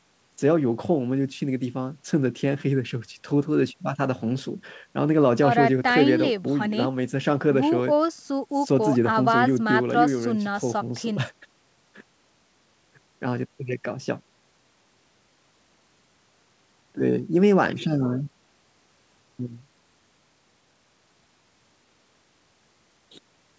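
No faults found; the speech stops at 8 kHz, which fits the wideband limit of the microphone processing and a G.722 call codec at around 64 kbps.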